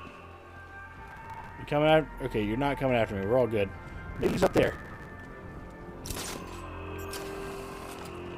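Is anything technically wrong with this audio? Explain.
Yes. Processor overload crackle occurs twice, from 1.11 to 1.49 s and again, longer, from 4.16 to 5.10 s. The processor falls behind and misses dozens of buffer deadlines in a row, then over a hundred in the second burst. The spacing points to buffers of around 5 ms. Each missed buffer is skipped and leaves a tiny hard-edged gap. Together the gaps form a gritty, tearing crackle over the sound, and it stops when the load eases.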